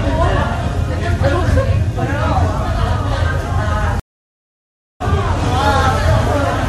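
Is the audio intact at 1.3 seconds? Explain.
Yes, at 1.3 seconds the sound plays through intact, with no dropout, click, distortion or other audible fault at that moment.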